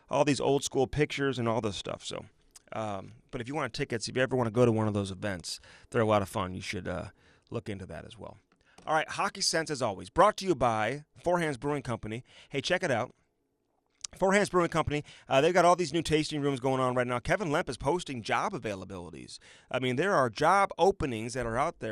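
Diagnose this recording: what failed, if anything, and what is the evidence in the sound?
The codec stage failed. The whole recording sounds dull, with a gurgling, granular distortion that is plainly audible throughout. This is likely MP2 compression at a rate around 80 kbps. MPEG Layer II divides the signal into 32 equal sub-bands and shares bits among them. When the budget is too small, entire upper bands are dropped and switch on and off, and the bands that remain are coarsely quantised.

The second failure is DAB burbling, which comes from the reception side of the chain. There are two short bursts of burbling. The first runs from 0.46 to 0.53 s, between "all these" and "school pictures and all". The second runs from 20.74 to 20.79 s, just after "mean there are job". Bit errors, at a rate of a small fraction of a percent, got past error correction into the MP2 data. Corrupted samples put noise blips into individual sub-bands, and corrupted scale factors make bands jump in level for up to a frame.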